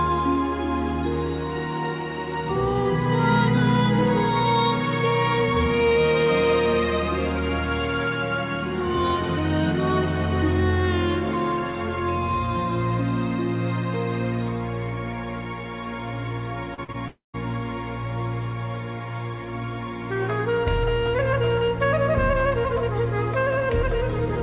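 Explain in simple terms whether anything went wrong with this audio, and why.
Several brief gaps cluster just before 17.4 s, all heard through the muffled sound of a phone-style call line that keeps nothing above 4 kHz.

Short concealed packet loss at 16.74 to 16.80 s and 16.92 to 16.96 s: a few hundredths of a second never arrived, so the receiver briefly stretched the preceding sound, giving a quick smear rather than a gap.

A burst of packet loss at 16.84 to 16.90 s: several packets in a row went missing, so the stretched sound fades out before the audio picks up again further on.

A long network dropout from 17.08 to 17.36 s, likely caused by the connection stalling: the filler sound dies away and leaves about 0.13 s of near-silence, which sets it apart from the two shorter kinds of loss.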